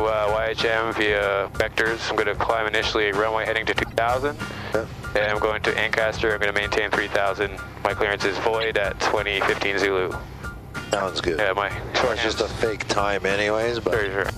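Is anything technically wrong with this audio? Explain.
Yes. Corrupt frames were decoded at 3.85–3.94 s, 5.18–5.26 s, 8.60–8.65 s, 10.92–11.02 s and 14.05–14.07 s. Flipped bits in the compressed data were played as if valid, so misread gains and codes put energy at the wrong frequencies. Each event is a short chirp or noisy blip lasting a few frames, roughly one frame at the end. The loudest reach about −10 dBFS and the others sit lower. Unlike a dropout or concealed packet loss, these add foreign sound rather than a gap or a smeared repeat.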